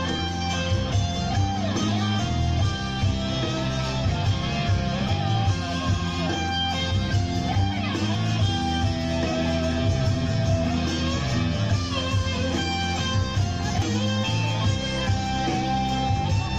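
At 5.09, 8.15 and 13.82 s, damaged data in the compressed stream makes the decoder misread frames, heard as a chirp, squawk, click or short hole.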